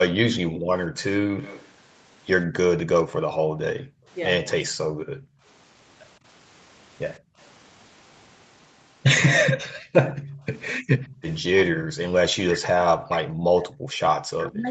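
From 0.32 to 0.94 s the speech dips in patches by roughly 15 dB. This is likely speech suppressed in double talk, where the canceller ducks the near talker while the far side is also active.

From 1.26 to 1.37 s the background is gated by the echo canceller, and the room sound drops by about 5 dB for a moment before returning.

From 1.40 to 1.69 s a faint copy of the sound trails 167 ms behind, sitting well below the speech. This is likely an echo leak that the far end's canceller failed to remove.

Heavier gating follows from 3.09 to 5.43 s, with the background pulled down intermittently by up to about 21 dB. It happens again briefly from 7.19 to 7.37 s, at up to about 24 dB.

The delayed copy reappears from 9.40 to 11.22 s, again 167 ms late and even quieter.

From 10.03 s to the end, the speech cuts in and out with drops of roughly 40 dB. This is again likely double-talk suppression.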